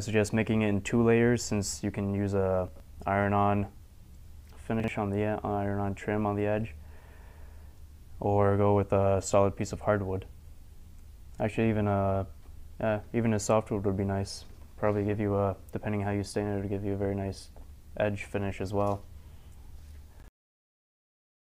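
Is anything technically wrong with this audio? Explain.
Yes: brief jumbled moments at 2.68–2.80 s, 4.80–4.88 s and 20.20–20.28 s are chunks out of order, where a 40 ms block plays one or two blocks late.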